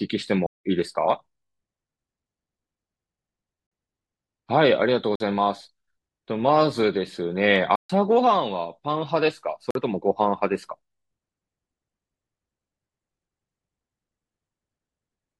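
The output buffer was likely not filled in time, so blocks of digital silence replace the speech at 0.46–0.65 s (about 186 ms, which fits an 8192-sample buffer), 3.67–3.72 s, 5.16–5.20 s and 9.71–9.75 s (each about 46 ms, matching a 2048-sample block), and 7.76–7.90 s (about 139 ms). Each cuts abruptly to silence and back. The 46 ms gaps register as brief holes, and the longer two as audible dropouts.

At 7.56 s and 10.55 s, dropped samples, likely just a handful lost, make the waveform jump forward by a fraction of a millisecond. Nothing audible goes missing. Each leaves a single sharp click, a thin vertical line across the spectrum.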